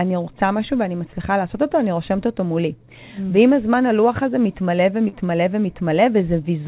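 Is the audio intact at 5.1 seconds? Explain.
No. Between 5.08 and 5.15 s there is short concealed packet loss. About 40 ms of the call never reached the decoder in time, so the receiver extended the preceding speech to fill the gap and blended back into the real audio, leaving a brief smear or wobble.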